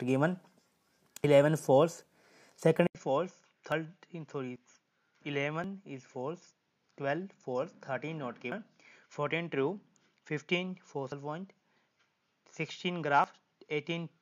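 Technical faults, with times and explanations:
1.24, 3.72, 5.64, 8.52, 11.12 and 13.24 s: dropped buffer (overrun). At each the sound jumps straight ahead with no silence in between. Roughly 40 ms goes missing each time, and closer to 70 ms at 8.52 s, enough to cut away part of whatever was sounding. The likely cause is the recording program failing to collect its samples before the hardware overwrote them, so that stretch is lost and the two sides are joined directly.
2.87 s to the end: input switched to a poorer device. After a brief 80 ms silence the sound turns dull and boxy. The level falls by about 10 dB, and a new background noise sits about 50 dB below the signal. Because the tone, bandwidth, level and noise all change at one instant, this is likely the system moving its input to another microphone or a headset's call profile, which passes a narrower band.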